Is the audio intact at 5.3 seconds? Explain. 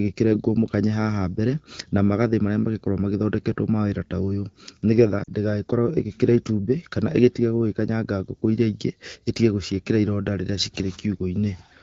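No. From 5.24 to 5.29 s, just before "ndĩgagĩkorwo ĩgĩkĩrĩa itumbĩ kana", the speech has lost AMR speech frames. About 40 ms failed, which fits two 20 ms frames. The wideband decoder filled the hole by repeating the last good pitch and vocal tract settings at falling gain, so the sound briefly drops to near silence, then comes back weak or rough for a moment. A plain dropout would instead leave a hard silent gap or a click.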